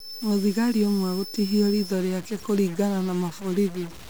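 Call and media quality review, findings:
Stuck bit, throughout the speech. Added noise and distortion on all speech; pauses filled with a noise floor rather than silence. Likely a single data line or converter bit held fixed, offsetting about half of samples by a step of around -40 dBFS.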